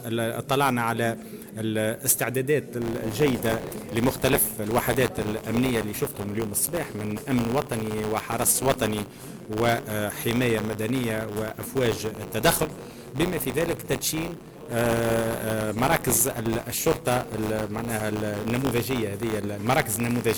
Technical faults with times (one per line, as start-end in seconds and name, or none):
2.81-20.38 buffer tearing